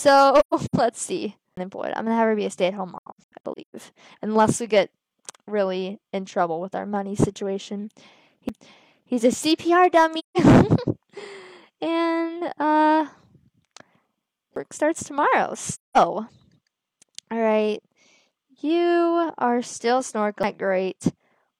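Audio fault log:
0.39–0.75 s, 2.98–3.75 s, 10.18–10.37 s, 15.72–15.97 s: AAC frame loss with muting. The decoder zeroed the spectrum of lost frames: 5 frames (213 ms) scattered over 341 ms, 11 frames (469 ms) over 768 ms, 4 frames (171 ms), then 5 frames (213 ms). The longest runs in the first two are roughly 150 ms. Overlapping windows fade the sound out and back in, so these are soft-edged dips and holes. A spectrogram shows full-band vertical gaps with tapered edges. The waveform shows smooth envelope dropouts.
1.56 s, 8.49 s, 14.56 s, 20.43 s: CD skip. The player lost tracking and briefly muted, for roughly 15 ms, 5 ms, 7 ms and 7 ms. It then resumed from another turn of the spiral, heard as a tick or tiny gap and an abrupt jump forward or back in the material. A spectrogram shows a thin vertical break with mismatched content on either side. The waveform shows a short silence and a discontinuity where it resumes.
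15.02 s to end: channel delay (comb filtering). One channel lags by about one sample, roughly 0.02 ms. When the channels are summed to mono, shared content cancels at evenly spaced frequencies. Here the first notch falls near 20 kHz, so the effect only dulls the very top rather than sounding hollow. A spectrogram shows the uppermost band thinning toward 20 kHz from 15.02 s onward. The waveform shows no obvious change.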